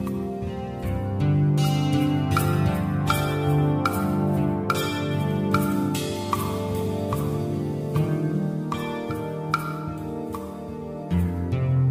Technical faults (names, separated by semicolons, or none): none